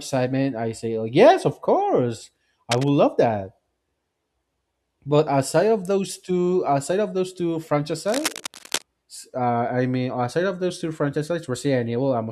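A speech recording with cable scratch noise in two spots: a short burst from 2.71 to 2.90 s and a longer one from 8.06 to 8.84 s, both fairly loud, roughly 10 dB below the speech. The ragged scratching likely comes from a worn cable or connector being jostled, its contact flickering.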